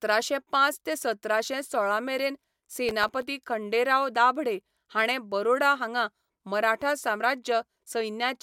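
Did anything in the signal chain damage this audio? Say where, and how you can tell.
Yes. From 2.67 to 3.22 s a gritty burst of crackle tears across the speech and stops once that half-second passes. This is processor overload crackle at the driver or buffer stage. The processor fell behind and missed about ten buffer deadlines in a cluster, each time replaying a scrap of old audio with hard edges instead of fresh samples. The buffers were very short, around a millisecond and a half each.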